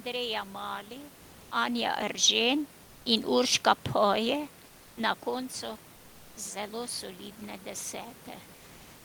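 From 1.52 to 3.36 s an automatic gain rise lifts the level by about 5 dB as the gain control decides the input is too quiet. Unlike a talker moving closer, the room noise swells along with the voice, slowly over nearly two seconds.

From 4.65 to 4.97 s, for 320 ms, the room background gives way to a smooth, detail-free hiss about 2 dB quieter: comfort noise in place of the background, likely from discontinuous transmission. It's the changed texture, not just the level, that separates this from a talker shift.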